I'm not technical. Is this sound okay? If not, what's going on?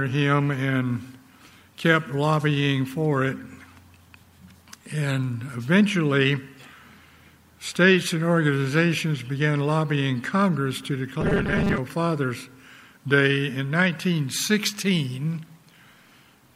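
No. From 11.21 to 11.81 s the sound turns harsh and mechanical, with a steady 200 Hz buzz. This is robotic sound from repeated short buffers. Fresh audio is likely arriving too slowly, so the software keeps replaying the last tiny slice, about 5 ms long. Roughly half of that stretch is these repeats, and the real audio underneath is skipped. The repeating slice forces the fixed buzzing pitch.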